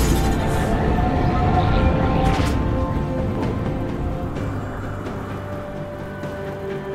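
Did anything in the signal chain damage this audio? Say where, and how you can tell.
Yes. From 1.05 s to the end, a crude rate conversion at the sample-format stage resampled with plain linear interpolation and no filtering, which fits a change from 44.1 kHz to 48 kHz. The resulting error, roughly 45 dB below the signal, adds a faint gritty, inharmonic fizz that follows loud, bright passages.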